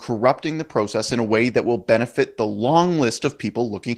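Throughout, Opus voice compression, fitting about 16 kbps, leaves the speech hoarse and slightly robotic; the spectrogram shows smeared harmonics and blotchy energy above 8 kHz.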